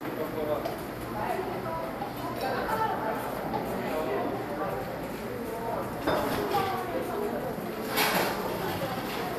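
Throughout, the sound is dull and carries a gurgling, granular edge, likely from MP2 compression at a low rate, consistent with about 80 kbps. MPEG Layer II starves its 32 sub-bands of bits, so upper bands drop out or flicker and the remaining bands are coarsely quantised.

From 1.13 to 1.44 s and again from 5.90 to 6.45 s, DAB burbling breaks into the audio with short blips of noise. A small fraction of bit errors slipped past error correction, corrupting samples so that short blips of noise land in single sub-bands.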